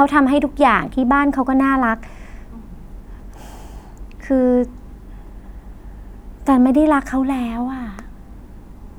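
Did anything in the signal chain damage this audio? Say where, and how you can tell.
No, nothing in this speech recording stood out as damage from any stage of the chain on listening.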